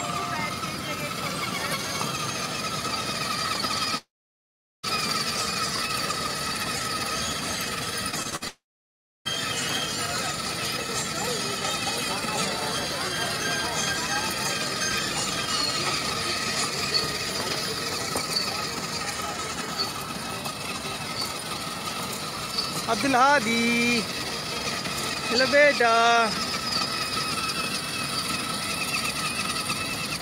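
A long network dropout is the likely cause from 3.97 to 4.85 s: about 0.86 s of audio never arrived, so the last sound smears into a fading buzz before roughly 0.77 s of silence, and the sound resumes further on. From 8.11 to 8.44 s repeated packet loss punches four short holes, the longest 59 ms, each patched by extending the previous sound, so about a third of that stretch turns choppy and robotic. A second likely long network dropout follows at 8.48 to 9.27 s, losing about 0.78 s, with a brief fading buzz and then roughly 0.67 s of silence.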